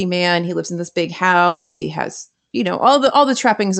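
From 1.47 to 1.83 s, about a third of a second of the speech is replaced by a smeared buzz stretched from the preceding sound, fading without reaching silence, before the speech resumes with that stretch gone. A long network dropout is the likely cause; unlike a brief packet-loss click, the concealment is audibly sustained, and the call codec's high-frequency cut near 8 kHz persists throughout.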